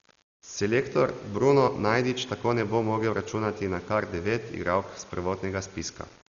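Low bit depth without dither runs through the whole speech clip. The grainy distortion tracks the voice, around 30 dB below it, which fits rounding to about 7 bits. Dolby Digital compression is also present throughout. Heavy artefacts and nothing above 6.9 kHz give a dull, rough, fluttering sound, likely from a bitrate near 40 kbps.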